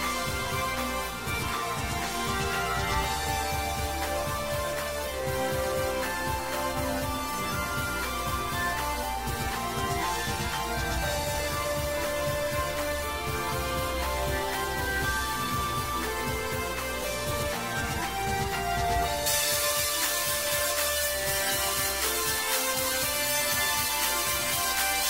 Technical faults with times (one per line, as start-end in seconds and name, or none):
19.26-25.09 pre-emphasis left on